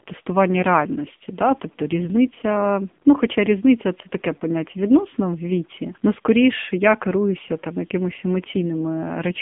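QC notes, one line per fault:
Throughout, AMR narrowband mobile codec: the speech passes through a phone-line band of roughly 150 Hz to 3.6 kHz, with nothing above 3.8 kHz, so sibilants and air are gone. The vocal-tract model rebuilds each 20 ms frame from only a few excitation pulses, and the heavy damage at this bit budget gives a buzzy, synthetic, thin tone that fits one of the low AMR-NB modes, around 6.7 kbps.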